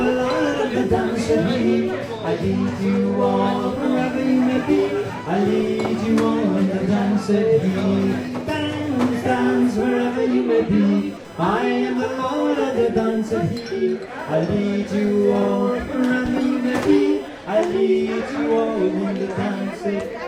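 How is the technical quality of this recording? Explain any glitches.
The recording carries one fault, present from start to finish. Computer activity noise runs throughout: shifting processor or graphics load disturbs the ground shared with the audio circuit, adding a buzzy, chirping whine pulsing near 1 kHz, roughly 35 dB below the sound, rising and falling with the machine's activity rather than the audio.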